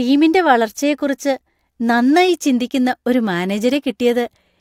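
Nothing technically wrong turns up in this short bit of speech, so there's no problem to point to and no time or cause to give.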